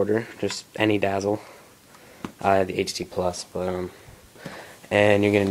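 DAB burbling occurs from 2.92 to 3.15 s. Bit errors from weak reception slip past error correction into the MP2 data, corrupting samples, which put short noise blips into single sub-bands, and scale factors, which make sub-bands jump in level for up to a frame. This produces short blips of noise over the sound.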